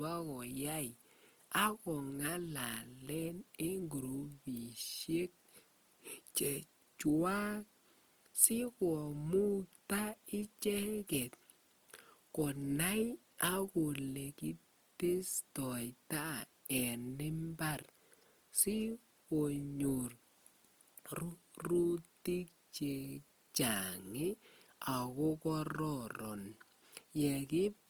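From start to finish the speech has a grainy, roughened texture, with harmonics turning noisy rather than swirly, and the bandwidth stays full. That's likely Opus compression in its music mode, starved for bits, which sounds like around 24 kbps, filling bands with folded or noisy energy.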